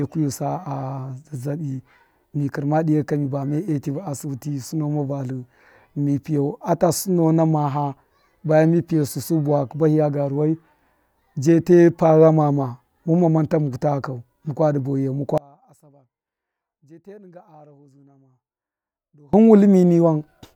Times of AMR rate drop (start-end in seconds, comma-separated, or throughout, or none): none